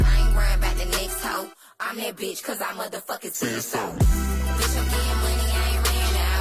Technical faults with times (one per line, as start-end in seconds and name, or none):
none